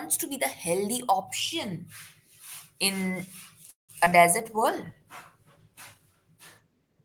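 From 3.69 to 4.13 s the speech suffers repeated packet loss, giving it a robotic sound. Audio kept failing to arrive in time, four times within that short stretch. The receiver filled each gap by stretching out the last sound it had, which covers about 238 ms, more than half the span. Another 80 ms simply drops out, and the longest single gap runs 192 ms. The result is choppy speech with chunks missing.

At 4.40 s a call bitrate drop begins and lasts to the end of the clip. The connection's bandwidth estimate fell, so the encoder cut its rate from 32 kbps to 18 kbps and held the lowest rate for 1.81 s. With fewer bits to spend, the coder represents the signal more coarsely and gives up the top of the spectrum. The speech turns muffled and rough, with a watery texture that persists until the clip ends.

Overlapping that drop, from 4.44 to 5.00 s, comes a jitter buffer slow-down. The receive buffer was short of reserve, so it rebuilt its cushion by repeating single pitch periods and small slices of pauses. 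This adds about 43 ms and plays the passage at 93% speed without changing pitch. Syllables sound slightly drawn out.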